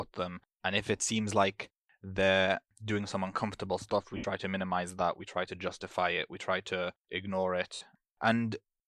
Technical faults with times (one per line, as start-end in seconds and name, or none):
4.17-4.24 lost LE Audio frames
7.75-7.81 lost LE Audio frames